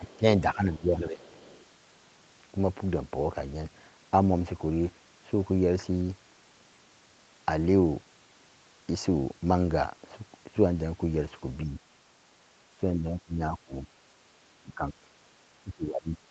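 The speech dips from 0.0 to 0.25 s, by up to about 15 dB, and again from 0.41 to 1.23 s, by about 10 dB. A faint second voice, about 30 dB below the speech, comes through from 0.07 to 0.17 s and from 1.23 to 1.65 s. That is the other side's voice leaking through, likely because the echo canceller left some of the loudspeaker playback in the microphone signal.

Later the speech sags briefly at 11.65 to 11.78 s, by about 5 dB. It then drops harder, by up to about 20 dB, at 12.99 to 13.91 s, 14.59 to 15.19 s and 15.47 to 16.18 s. These drops are speech suppressed in double talk, likely from the canceller turning down the talker while both sides spoke at once.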